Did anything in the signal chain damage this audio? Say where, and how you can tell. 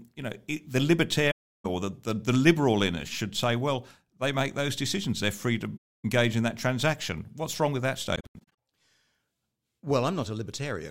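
Yes. AAC frame loss with muting in the codec zeroed frames, leaving soft-faded silent holes at 1.30–1.66 s and 5.77–6.05 s, plus scattered dropouts across 8.15–8.57 s.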